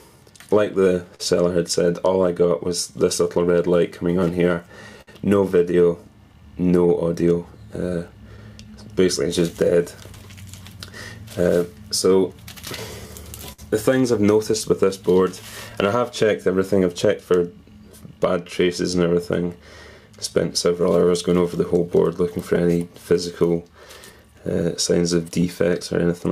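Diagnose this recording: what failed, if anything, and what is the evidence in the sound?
Clock drift between sender and receiver, throughout: network timing stage. The sender's clock runs roughly 4% slow, so the jitter buffer keeps draining.

Repeated timing corrections, 0.16 to 25.98 s: the receiver repeatedly stretches short pieces, playing at 98% speed and adding roughly 0.7 s.

Short stall from a late packet, at 1.15 to 1.21 s (42 ms) and 5.01 to 5.09 s (60 ms): the buffer ran empty and the last sound was held until the packet arrived, with nothing lost.

Scattered short gaps, 7.35 to 13.60 s (around ten, longest about 70 ms), 17.40 to 19.51 s (around seven) and 22.55 to 26.21 s (around five): lost or late packets, each patched by continuing the last sound, leaving brief ticks and smears.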